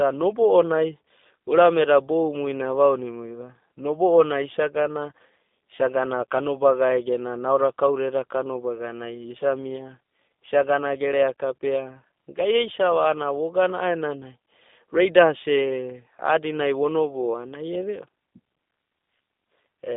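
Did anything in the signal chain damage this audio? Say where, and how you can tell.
Yes, at the codec stage: G.729 coding runs through the whole clip. The sound is narrowband telephone speech, roughly 200 Hz to 3.6 kHz, with nothing above 3.7 kHz, and it has a plainly rough, synthetic edge. That fits an 8 kbit/s G.729-type codec, which resynthesises speech from a vocal tract filter, a pitch predictor and a few pulses per frame. A spectrogram shows a flat ceiling near 3.7 kHz with an empty band above it.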